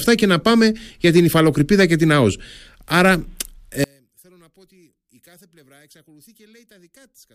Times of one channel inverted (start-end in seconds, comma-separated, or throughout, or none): 3.84-7.35